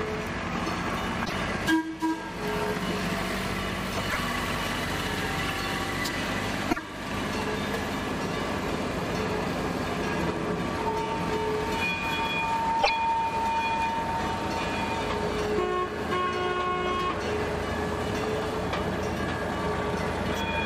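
At 1.22–1.33, 4.06–4.17, 6.68–6.79 and 12.79–12.90 s, damaged data in the compressed stream produces short glitches of about 0.11 s each. Corrupted bytes cause the decoder to misread frames, lose sync and hunt for the next valid header before playback resumes.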